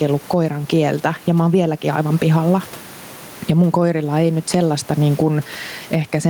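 Throughout the speech there is gain pumping, with the level swinging by around 15 dB; the room noise sits about 34 dB below the voice. The likely cause is input gain set far too high, with a fast limiter clamping down on peaks. On a waveform the envelope looks flattened and squashed.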